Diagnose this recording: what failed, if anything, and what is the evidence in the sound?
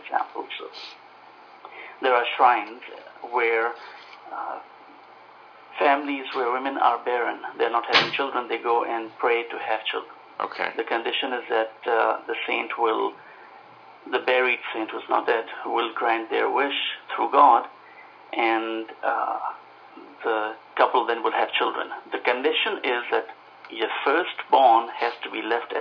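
Nothing failed: the signal holds steady level and continuity throughout, with no dropouts, discontinuities, or distortion audible at any stage from capture to playback.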